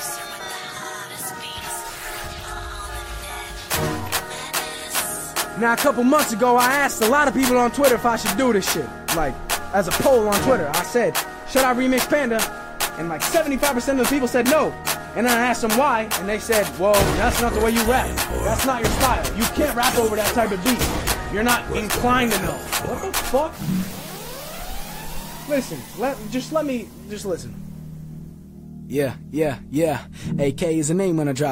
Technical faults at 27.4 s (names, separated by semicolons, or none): none